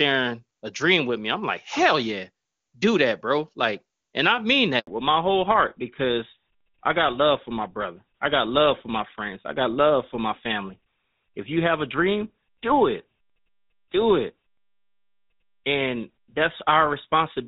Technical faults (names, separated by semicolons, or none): handover gap; fallback to narrowband